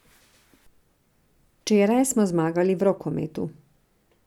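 No technical faults can be heard anywhere in the speech. There is no event to place in time and no mechanism to explain.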